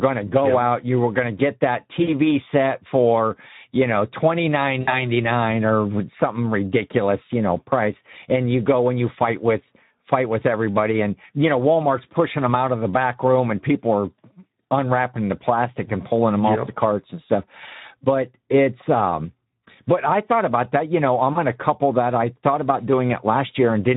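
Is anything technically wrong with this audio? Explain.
Yes. The whole clip runs through the Speex codec, and the damage is plainly audible: speech comes out hoarse and noisy because the CELP coder has too few bits for the excitation, which fits a low setting around 11 kbps.

There are also three spots of VoIP packet loss concealed by the speech codec. The first is at 2.03 to 2.14 s, after "going to get that", with about 40 ms missing. The second is at 4.81 to 4.93 s, about 60 ms. The third is at 21.33 to 21.38 s, after "know I'm" and before "to couple that I", about 20 ms. Each time, the decoder keeps extending its last pitch and filter at falling gain, so you hear a fading buzzy tone or coloured noise, and the speech stays weak or distorted just after.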